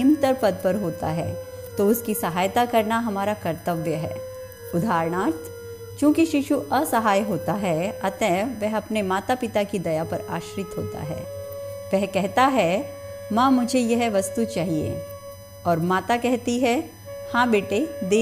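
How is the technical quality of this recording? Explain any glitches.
The recording carries one fault, present from start to finish. USB whine: current drawn by the USB bus in 1 ms frames leaks in through power or ground, adding a steady fixed-pitch whine at 1 kHz, strongest at its 6 kHz harmonic, around 30 dB below the sound.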